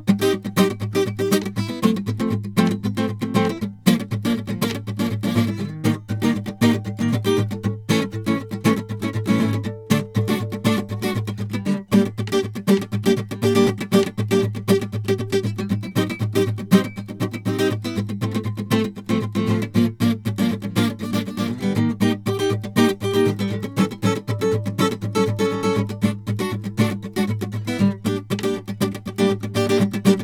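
No technical faults can be heard in this music.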